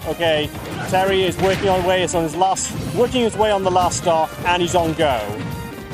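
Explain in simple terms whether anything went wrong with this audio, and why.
A train of clicks runs from 4.54 to 5.82 s, near the end of the clip. Around fifteen sharp ticks arrive at an uneven pace, averaging about 9 per second, and they are roughly as loud as the sound itself. Each tick has much the same shape, which points to something repeatedly injecting a short pulse into the signal, likely electrical interference from nearby equipment or a faulty connection or power supply.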